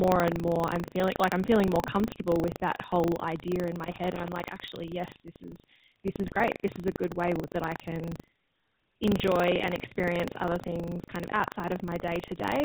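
This is a speech clip, and it carries the sound of the GSM full-rate codec throughout. The damage is plainly audible. Nothing above 4 kHz comes through. The voice has the gravelly, buzzy roughness of a coarse pulse-driven vocal-tract model, which fits the 13 kbps full-rate mode. Buffer tearing also runs the whole length. A rattling buzz at 25 Hz sits on the voice wherever there is signal. The writer and reader of the playback ring buffer have drifted into each other. So a small part of each period, around a tenth or less, replays audio from roughly 70 ms earlier, with hard joins at both edges. From 3.85 to 4.46 s there is loose connector crackle. This is an irregular burst of scratching as a poor contact makes and breaks, chopping the signal. Any DC on the line would turn those breaks into pops. GSM bit errors appear from 6.26 to 6.41 s. The voice breaks into squawks and gargling there, because corrupted filter, pitch or gain values reached the decoder. 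The pattern fits a bit error rate near 2 percent spread over about seven speech frames.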